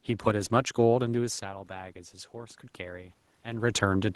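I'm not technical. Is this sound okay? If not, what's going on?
No. From 1.17 to 3.73 s there's automatic gain rising: after the voice drops away from the microphone around one second, the system slowly turns the level up, lifting voice and room noise together.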